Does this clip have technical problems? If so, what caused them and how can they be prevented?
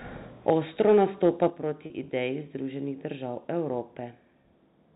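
Yes. Microphone overload shows up as a harsh, crackling edge on the loudest speech from 0.48 to 0.53 s and again from 0.80 to 1.47 s. Peaks push roughly 3 to 4 dB past the converter's limit, likely because the input gain was set too high, and their tops are flattened. Unlike codec distortion, the crackle tracks only the peaks. Prevention: lower the microphone gain so peaks stay below full scale.

The microphone volume stepped down twice, at 0.50 s by about 4 dB and at 1.50 s by about 6 dB. Speech and background drop together at once, first during and then right after a clipped passage, likely the call software cutting input volume in response to the overload. A fader would ramp gradually rather than jump like this. Prevention: disable automatic input adjustment and set the level by hand.

Packet loss with pitch repetition occurs at 1.86 to 1.90 s, a 40 ms gap consistent with two lost 20 ms packets, and at 4.42 s, a 20 ms gap consistent with one. 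The receiver repeats the last pitch period, so the sound briefly holds as a buzzy note instead of going silent, which sets it apart from a dropout. Prevention: use a more stable network connection or enable forward error correction.

The G.711 telephone band is audible throughout, with nothing above 4 kHz.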